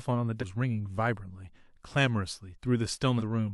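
Compressed frames skipped at 0.40–0.44 s and 3.18–3.23 s: the speech leaps forward by roughly 300 ms, then 200 ms, consistent with several lost 46.4 ms frames.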